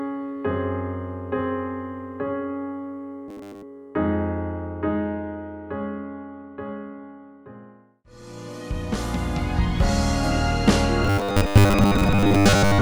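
From 3.28 to 3.63 s, and again from 11.05 s to the end at 12.82 s, the sound turns into a rigid, metallic buzz pitched at 100 Hz. This is robotic sound from repeated short buffers, likely caused by a 10 ms segment being replayed over most of the time while new audio was skipped. Plain dropouts leave silence instead. This buzz holds one fixed pitch and still loosely tracks the original sound.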